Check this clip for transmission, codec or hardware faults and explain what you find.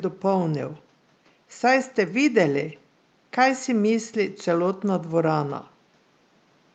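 Nothing here points to a transmission, codec or hardware problem: the faint room noise sits well under the speech, about 36 dB down, and the call path's coding sounds just as it normally would, with the top end easing off around 12 kHz.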